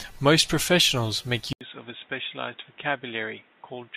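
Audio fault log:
1.53 s to end, input switched to a poorer device: after "professionals make", an 80 ms gap precedes speech that is about 10 dB quieter, dull and boxy, with nothing above 3.8 kHz and a new noise floor roughly 30 dB down, likely a change to a narrower-band microphone.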